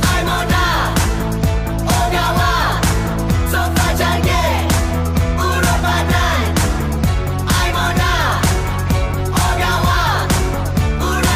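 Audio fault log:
throughout: block size mismatch (truncated). Each block's tail is cut off, so the repeating cut buzzes at 91.9 Hz. Playback speed stays at 1.0 times.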